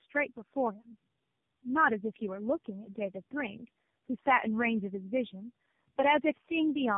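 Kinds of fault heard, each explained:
Tandem speech coding: The speech was decoded and re-encoded by several speech codecs in a row, each working on the previous one's damaged output. Here it sounds rough, muffled and warbly. Nothing is above 3.7 kHz, which fits narrowband telephone coding; three low-rate coders were chained together.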